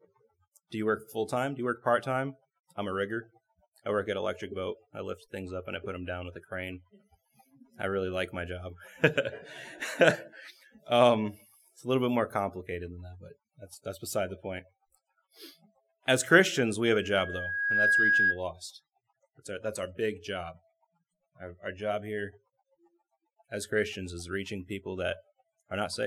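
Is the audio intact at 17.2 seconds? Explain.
No. At 17.2 seconds the audio is caught in a loudspeaker feedback squeal that runs from 16.91 to 18.41 s. A microphone is picking up the loudspeaker it drives, and at 1.6 kHz the loop gain exceeds unity, so that frequency keeps reinforcing itself. It swells over roughly a second into a steady, piercing tone about 5 dB above the surrounding sound before it stops.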